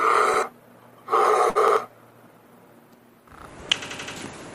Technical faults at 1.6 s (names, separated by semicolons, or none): short stall from a late packet; repeated buffer